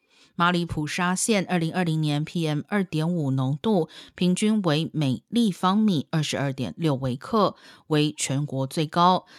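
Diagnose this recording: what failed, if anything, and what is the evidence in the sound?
Nothing failed; no fault is audible anywhere in this speech.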